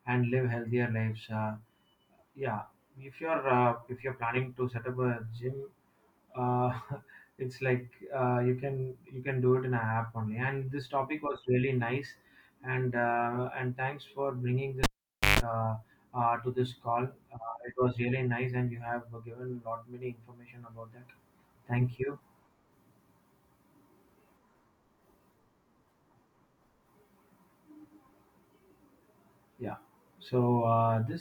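At 14.84 s the cable is pulled and plugged in: a pop, about 0.51 s of near silence, a 145 ms burst of 50 Hz mains buzz, then a pop at 15.40 s.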